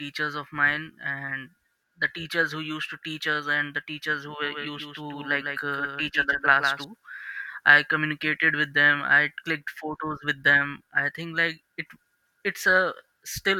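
Doubled audio track from 4.44 to 6.84 s, just after "teachers who": a second copy, roughly 5 dB quieter, trails by about 150 ms, likely from a slower capture path.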